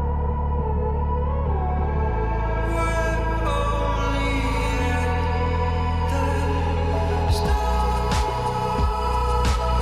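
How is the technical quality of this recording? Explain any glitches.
The recording has one audible glitch, brief and isolated.

Damaged data in a compressed stream, at 1.44 s: a short stretch of the encoded stream was corrupted, so the decoder could not correctly interpret the frame data there. It briefly loses track of the frame structure and resynchronises at the next valid header, leaving a tiny blip in the sound that lasts only about 14 ms before normal playback resumes.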